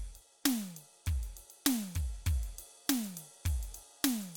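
No technical faults are audible anywhere in this music.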